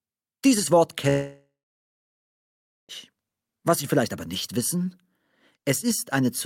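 At 1.09 s the sound smears into a fading buzzy hiss, then drops to near silence for roughly 1.4 s before picking up again at 2.92 s, about 1.8 s further along. That's likely a long network dropout, with the receiver papering over the gap.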